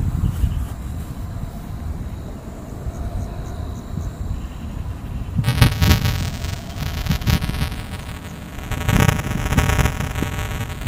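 From 5.44 s to the end at 10.87 s, the audio carries buffer tearing: a steady robotic buzz at about 345 Hz, which fits a 128-sample buffer. The writing side and the playback hardware have slipped against each other, so within every period a small slice, under a tenth of the buffer, repeats audio from roughly 5 ms earlier, with hard joins on both sides. Unlike an underrun, there are no gaps or silences, and the buzz appears only where there is signal.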